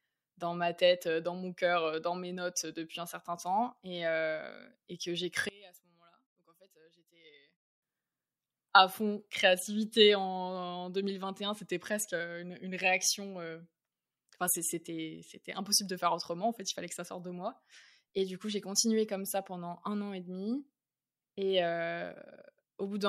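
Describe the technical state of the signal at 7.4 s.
At 7.4 s the speech sits inside a drop from 5.49 to 7.82 s, just after "temps et que j'ai". The likely cause is one channel inverted. Summed to mono, the shared centre cancels, leaving a faint copy about 26 dB down.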